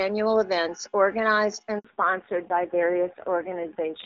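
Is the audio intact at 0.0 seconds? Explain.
Yes, the audio is intact at 0.0 seconds, with no fault at that moment, and the AMR wideband (HD Voice) codec path carrying the speech at 23.85 kbit/s leaves no damage beyond a faint trace at most.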